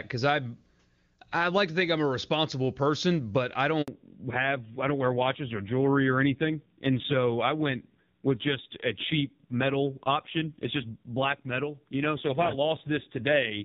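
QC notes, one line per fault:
3.82–3.88 s, handover gap: speech goes fully silent for 60 ms while the call switches networks, a clean dropout rather than the smeared, repeated sound of packet-loss concealment.
3.88 s to end, fallback to narrowband: the clear HD Voice sound gives way to audio with nothing above 4 kHz, dull and rough, which fits a low-rate AMR-NB mode around 5.9 kbit/s. It is a lasting step change, not a passing filter.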